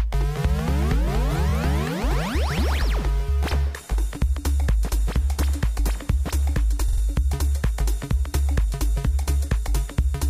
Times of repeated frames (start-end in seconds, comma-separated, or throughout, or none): 1.49-1.51, 6.88-7.01